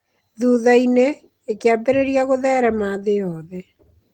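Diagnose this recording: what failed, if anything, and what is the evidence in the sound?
Nothing in the recording has failed: the speech comes through Opus voice compression in hybrid mode at 20 kbps with the full band kept and only light coding traces, and no stage from capture to playback shows a breakdown.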